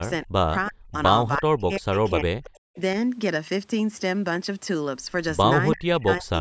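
The speech dips sharply five times: at 0.00 to 0.05 s, 0.23 to 0.40 s, 0.69 to 0.96 s, 1.31 to 2.77 s, and 5.74 s through the end. The first dip goes down about 25 dB. The others reach about 40 dB, with roughly a second lost across the long 1.31 to 2.77 s stretch. This is likely speech suppressed in double talk. The echo canceller misread the local talker as loudspeaker echo while the far side was talking and attenuated both.

Inside that long dip, from 2.47 to 2.60 s, a faint delayed copy of the voice surfaces about 334 ms behind the original, at roughly 35 dB below the speech. It is a brief scrap rather than a sustained repeat. The likely cause is echo leak: the far end's canceller failed to remove all of its loudspeaker pickup and sent the residue back down the line.

Between 3.48 and 4.36 s, six CD scratch ticks occur at about six to seven per second, each lasting at most around 1.5 ms. 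A blemish on the disc corrupted more data on each revolution than error correction could rebuild. The player concealed the damage by interpolating or muting, leaving short, regular clicks. The band above 8 kHz is empty, as expected from call microphone processing.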